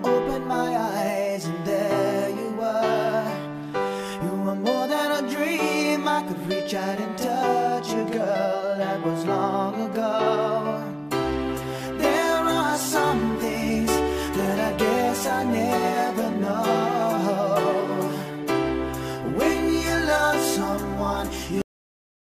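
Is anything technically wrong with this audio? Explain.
Yes. Cut-off end at 21.62 s: the final buffers were never written, so the sound stops mid-event and drops straight to digital silence with no decay.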